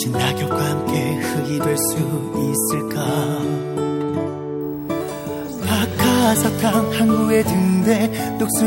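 A screen or video cable couples into the audio path from 4.61 s to the end, producing video or display buzz: a 59.94 Hz field-rate buzz with hash above it and a 15.7 kHz line-rate whine, sitting roughly 25 dB beneath the sound.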